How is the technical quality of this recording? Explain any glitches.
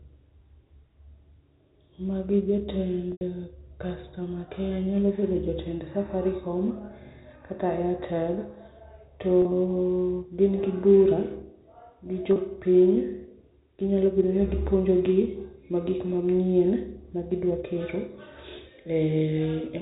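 The speech comes through a telephone-band channel with nothing above 4 kHz, consistent with G.711 A-law coding, and is marred by three brief packet-loss glitches.

Packet loss with pitch repetition occurs at 3.12–3.21 s (90 ms, pointing to about three 30 ms packets), 9.42–9.45 s and 12.33–12.36 s (30 ms each). The receiver bridges each gap by repeating the last pitch period. The short ones sound like a slightly held, buzzy tone. The longer one fades as the repetition decays, then cross-fades back. Unlike a plain dropout, the short gaps leave no silent hole, just a slightly held buzz.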